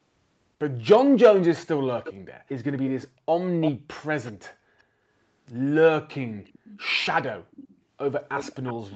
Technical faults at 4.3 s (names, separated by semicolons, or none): echo leak